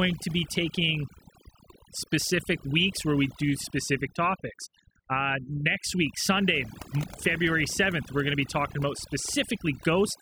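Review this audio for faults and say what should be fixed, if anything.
Overdone noise removal runs throughout this speech clip. The noise reduction is set too aggressively, so any frequency band sitting near the noise estimate gets cut hard or switched off. That takes the quiet parts of the voice with it, leaving near-silent gaps with twinkling specks. To prevent it, reduce the noise reduction amount or lower its threshold so only the true noise floor is attenuated.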